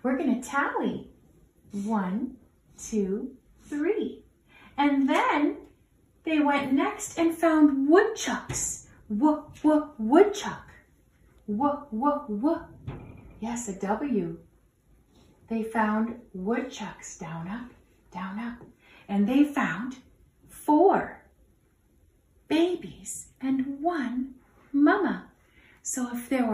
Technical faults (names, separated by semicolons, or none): none